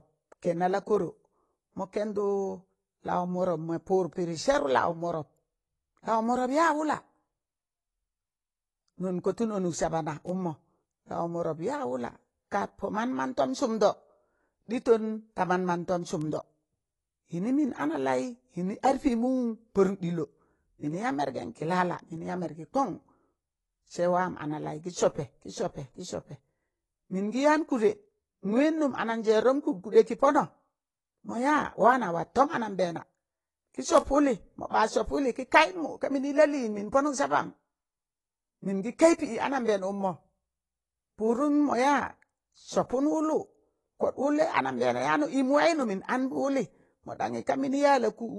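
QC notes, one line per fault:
Throughout: AAC compression, likely AAC-LC at a low bitrate, consistent with about 32 kbps. Nothing is present above 11.5 kHz, so the speech sounds dull. Coarse quantisation of the spectrum leaves clearly audible smearing and a warbling, fizzy texture on sibilants.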